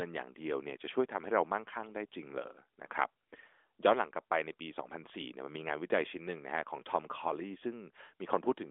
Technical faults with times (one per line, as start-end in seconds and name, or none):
none